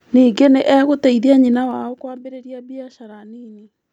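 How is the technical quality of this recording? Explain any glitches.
The recording has one clear glitch, a zipper noise during a fade. It runs from 1.45 to 2.23 s, just after "nĩ egũteithia". Here the speech level drops by roughly 20 dB. The drop is not smooth. It comes in 2 dB jumps, around fifteen per second. Each jump cuts the waveform abruptly and leaves a tiny click. Together the clicks form a fast ticking, a zipping texture laid over the speech while the level falls.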